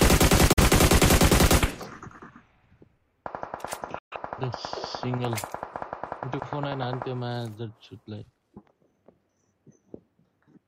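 A digital broadcast dropout, with the receiver muting over corrupted frames, cuts the sound to silence after an 8 ms fade at 0.53–0.63 s and 3.98–4.16 s. The lost stretches, 42.7 ms and 128 ms, fit about one and three frames.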